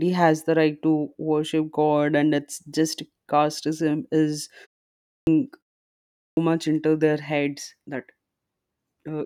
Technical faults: clipped start after a pause

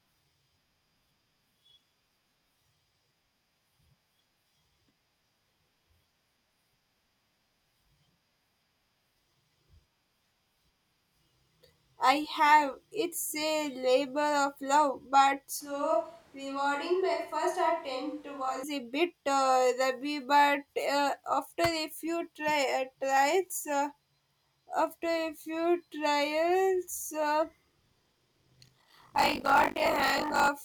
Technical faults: switch to a distant microphone; buffer tearing

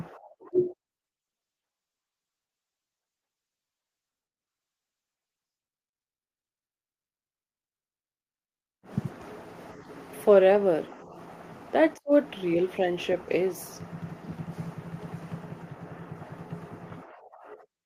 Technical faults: none

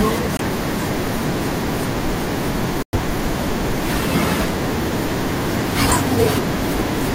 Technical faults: corrupt frame muted

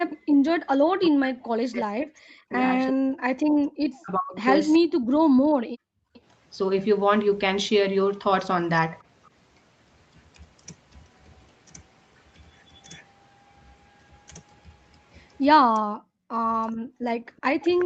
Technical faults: background gated by the echo canceller; echo leak; speech suppressed in double talk

